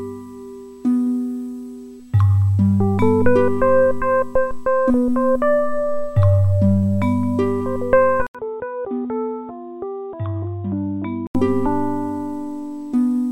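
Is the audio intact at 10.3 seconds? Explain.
No. At 10.3 seconds the clip is inside a stretch from 8.27 to 11.35 s where the input likely switched to a poorer device. After an 80 ms silence, the sound turns dull and boxy, with nothing above 3.8 kHz, drops by about 10 dB, and carries a faint new background noise. A plain low-pass filter would not explain the gap, level drop and new noise, and the full sound returns at 11.35 s.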